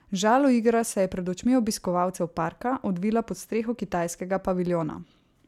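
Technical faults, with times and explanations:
No technical faults can be heard anywhere in the speech. Nothing in it calls for a time or an explanation.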